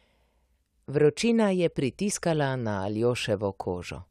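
Nothing in this bit of speech gives itself away as a technical fault, so there's nothing to point to along the way.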